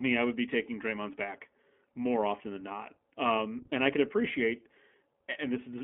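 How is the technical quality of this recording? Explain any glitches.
The recording is narrowband and plainly codec-coloured, with one brief packet-loss glitch.

Throughout, the iLBC codec limits the sound to a telephone band of about 200 Hz to 3.4 kHz and gives a slightly rough, synthetic edge that fits its 15.2 kbps, 20 ms frame mode. Unlike a plain band-limit, the graininess comes from coarse coding of the excitation signal.

From 3.70 to 3.73 s, just before "I could appreciate", lost iLBC frames left a gap of one 20 ms packet. The decoder filled it by repeating the last pitch cycle with added noise, giving a short held buzz rather than a silent dropout. Speech is clean again immediately, since each frame decodes independently.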